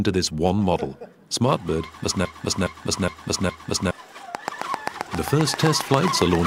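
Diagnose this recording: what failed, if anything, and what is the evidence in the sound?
Broken-record loop from 2.25 to 3.91 s: a 414 ms fragment plays four times back to back, and the audio that belonged in that span is gone. The likely stage is playback or a stream buffer that stalled and kept resending the last fragment it held.

Train of clicks from 4.35 to 6.36 s: about fifteen similar pulses arrive at a regular 7.5 per second, peaking roughly 15 dB above the sound. The likely source is interference in the analogue wiring or a struggling interface injecting a repeating pulse.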